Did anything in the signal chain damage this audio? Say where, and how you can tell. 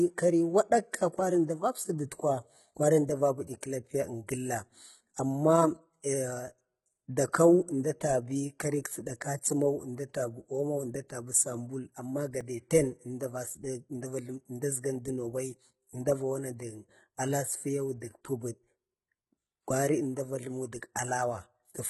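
Yes. At the codec stage, the speech throughout has gritty, metallic high frequencies with nothing above 11.8 kHz, and the damage is heavy. The likely cause is HE-AAC compression at a low bitrate: treble rebuilt from copied lower bands does not line up harmonically with the real spectrum beneath it.

At the driver or buffer stage, a repeated buffer at 12.41 s is heard as a brief click. The device played about 1.33 ms of audio a second time because new samples arrived late, which fits a 64-sample buffer. The hard join at the repeat causes the click.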